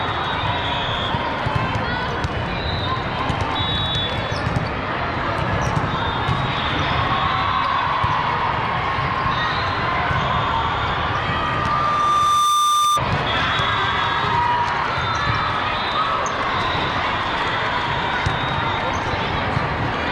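From 10.75 s to 13.04 s a single pure tone near 1.2 kHz rises out of the sound, swelling over roughly a second and a half until it sits noticeably above everything else, a few decibels louder, before it stops. This is loudspeaker feedback squeal: the microphone was picking up the loudspeaker it fed, and at 1.2 kHz the loop's gain passed one. That one frequency kept recirculating and growing on its own.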